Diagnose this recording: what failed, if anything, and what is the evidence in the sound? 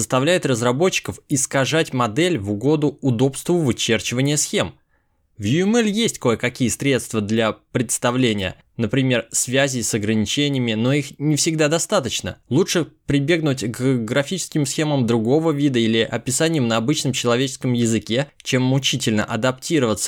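Drift correction step, 5.43 to 5.93 s: speech slows 5.7% and drops a semitone, then snaps back, likely a buffer stage correcting clock drift.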